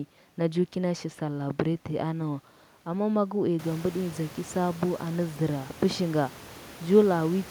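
A speech recording with no technical faults.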